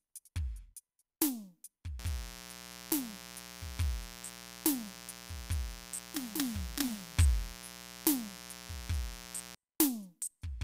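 A music clip with mains buzz from 1.99 s to 9.55 s. A steady, raspy buzz sits about 15 dB below the music. It is built on 60 Hz and its harmonics. Switching spikes from a dimmer, rectifier or unshielded cable cause it.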